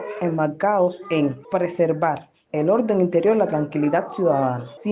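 Nothing stood out as a technical fault on listening.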